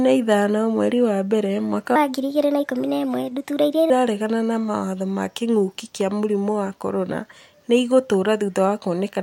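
From 1.96 to 3.90 s, after "mweri wa mbere mwaka", a section at the wrong speed, likely from a clock mismatch, runs 1.28 times fast, lifting the speech about four semitones and hurrying it until "na mawatho ma kĩngũki".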